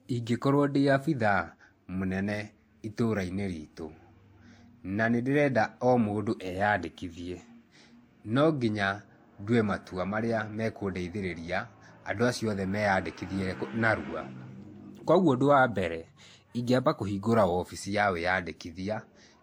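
The speech was likely passed through one lossy codec and then re-encoded by another, each adding its own artefacts. Throughout, the lower bandwidth cut-off of the chain remains, and two kinds of coding smear overlap, consistent with a WMA encode followed by a low-bitrate Vorbis one.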